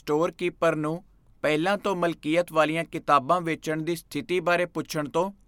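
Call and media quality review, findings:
No call or media quality findings to report for this review.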